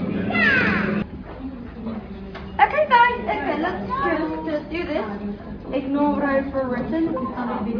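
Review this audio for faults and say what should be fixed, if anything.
Nothing stood out on listening, so there is nothing here that needs fixing.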